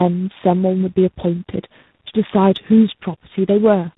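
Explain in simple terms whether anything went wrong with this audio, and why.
Yes. Throughout, the speech sounds rough, muffled and warbly, with nothing above 3.8 kHz. This is tandem speech coding: about three codecs in a row, each re-compressing the last one's damaged output.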